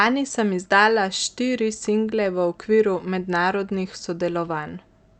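No faults found: the speech has come through a call path whose codec, consistent with Opus at a moderate bitrate, limits the top end to about 8 kHz and leaves only its ordinary coding texture, with nothing further to flag.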